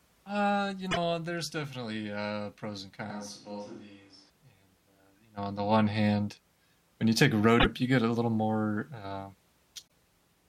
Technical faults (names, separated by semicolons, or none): damaged data in a compressed stream; switch to a distant microphone